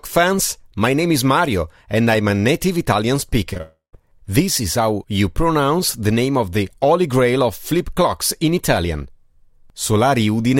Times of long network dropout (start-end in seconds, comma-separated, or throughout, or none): 3.61-3.95